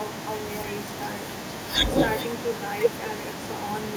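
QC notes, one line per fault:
Throughout: echo with no canceller. Every stretch of speech is trailed by a faint, thin copy of itself about a fifth of a second later, sitting about 19 dB below the direct sound. The far end is playing the call over a loudspeaker, its microphone picks that playback up, and nothing subtracts it. So the talker's own voice returns after the network round trip.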